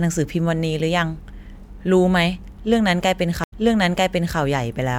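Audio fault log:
3.44–4.38 s stream reconnect: an 80 ms silence, then the speech resumes 0.86 s earlier as resent audio feeds a fresh decoder. A plain dropout would continue forward.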